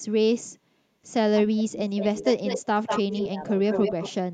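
Speech with two overlapping faults. Speech suppressed in double talk dips the voice from 1.46 to 2.59 s, 2.88 to 3.44 s and 3.76 to 4.33 s. The deepest cut is about 25 dB, in the first stretch. An echo canceller likely ducked its own talker along with the loudspeaker echo while both sides talked at once. Echo leak adds a copy of the voice 191 ms late, at 1.99 to 2.66 s, 2.86 to 3.28 s and 3.70 to 4.09 s. It sits only about 5 dB below the speech. The cause is likely loudspeaker pickup that the far end's canceller failed to remove.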